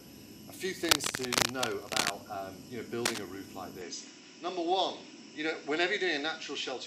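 Cable scratch noise appears from 0.85 to 2.11 s and again, briefly, from 3.05 to 3.24 s. Both times a dense, uneven scratching and rustling sits over the sound, somewhat louder than the sound itself. The likely cause is a worn cable, connector or control being moved, so its contact resistance jumps about rapidly and injects bursts of crackling noise into the signal until the contact settles.

An input switched to a poorer device at 3.81 s changes the tone for the rest of the clip. With no gap and roughly no change in level, the sound turns duller, with nothing above 7.9 kHz, and a faint new background noise appears far below the signal. This likely reflects the system moving to a different, narrower-band microphone or a headset call profile mid-recording.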